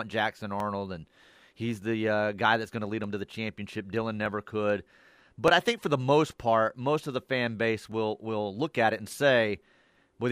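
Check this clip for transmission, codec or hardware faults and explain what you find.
One fault: clock drift buffer slips. From 0.60 s to 9.14 s, about seven short clicks recur every 1.22 s through the speech. Two independent clocks, likely differing by roughly 700 ppm, let the buffer drift until some 30 samples are dropped or repeated.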